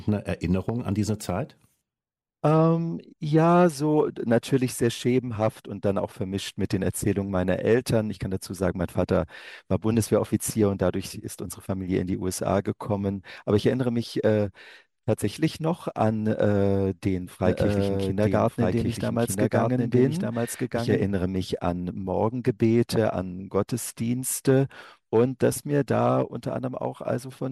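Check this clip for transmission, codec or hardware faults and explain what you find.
One fault is present: a doubled audio track from 17.46 s to 21.04 s. Over that stretch the sound is mixed in twice, with a second full-band copy trailing the original by about one second and sitting roughly 5 dB lower. The likely cause is the same signal arriving again through a slower capture path, or an edit that leaves two copies out of step. The copy carries no reverberant tail or room colouring, and it cuts in and drops out abruptly at both ends.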